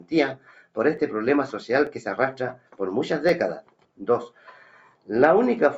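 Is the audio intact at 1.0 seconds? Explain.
No. At 0.98 s there is a single sharp click, a brief tick that shows on a spectrogram as a thin vertical line across all frequencies. Its likely cause is dropped samples: a fraction of a millisecond of the stream went missing, so the waveform leaps straight from one value to a later one. That gap is far too short to remove anything audible. The click comes only from the sudden step in the signal.

That same moment also sits inside a continuous fault, a noise suppressor applied to music or sounds. A suppressor tuned for speech is treating the sustained parts of this audio as noise and pulling them down. Onsets pass through, but held tones and decaying tails sink by about 5 dB. As a result, the level pumps and thins around 1.0 seconds, as it does across the whole clip.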